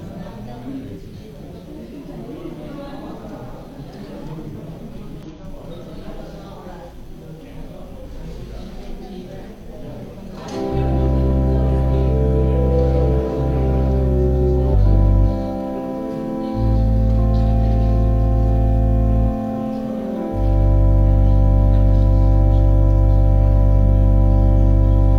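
Damaged data in a compressed stream causes short blips at 1.39–1.44, 5.23–5.28, 10.13–10.17 and 14.70–14.75 s, where the decoder misread corrupted frames and resynchronised.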